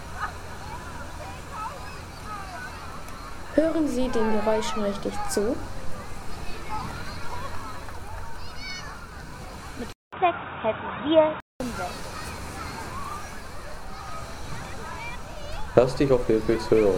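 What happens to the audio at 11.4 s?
At 11.4 s the sound sits inside a stretch from 9.93 to 11.60 s where it turns dull and boxy, likely because the input switched to a poorer device with a narrower band. A spectrogram shows everything above 3.8 kHz cut away, a faint new noise floor, and a 200 ms gap in the waveform at the switch.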